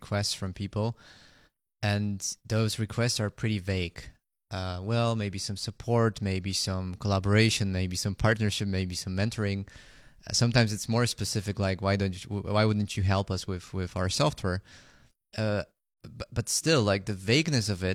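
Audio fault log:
Nothing to log here; I listened through the whole bit of speech and didn't catch a single glitch worth writing down.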